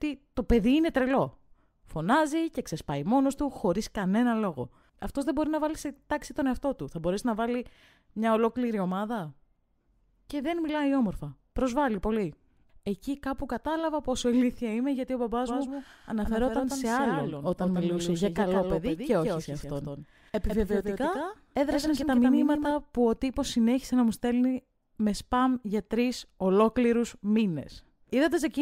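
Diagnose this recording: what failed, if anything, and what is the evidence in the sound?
From 15.47 s to 22.73 s the speech carries a second copy of itself trailing about 150 ms behind, only about 5 dB quieter, so every syllable is followed by a dry, full-band repeat with no reverberant tail. The copy switches on and off abruptly at those two points. This is a doubled audio track, likely from the same signal reaching the recording twice through a second, slower capture or routing path in the driver or buffer stage.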